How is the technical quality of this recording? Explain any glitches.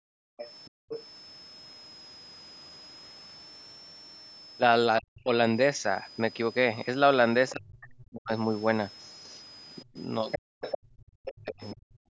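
The recording has a steady high whistle throughout and several echo-canceller problems in its speech, concentrated at the start and in the second half.

Switching supply whistle, whole clip: a switching power supply is running in an audible burst mode or beating with another, leaving a thin whistle near 5 kHz that wanders between about 4.96 and 5.39 kHz, sitting roughly 20 dB below the speech.

Background gated by the echo canceller, 0 to 0.89 s: while the loudspeaker was playing, the canceller pulled the microphone down hard, by about 40 dB at its deepest. The room sound drops away for around half a second in total, then returns once the canceller releases.

Other side's voice leaking through, 0.37 to 1.01 s and 10.31 to 11.41 s: a second voice is audible in those stretches, roughly 15 dB and then 10 dB below the main speech. The likely cause is the device's loudspeaker output reaching the microphone and escaping the echo canceller's removal.

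Speech suppressed in double talk, 4.99 to 5.3 s, 7.52 to 8.32 s and 9.82 s to the end: the talker's voice dips sharply, by as much as 40 dB. This is likely both sides talking at once, with the canceller unable to separate them and turning everything down.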